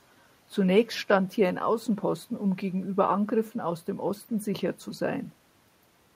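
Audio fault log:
No fault is heard anywhere in the speech. A low room noise sits beneath it, about 42 dB below the speech, and belongs to the recording space rather than the system.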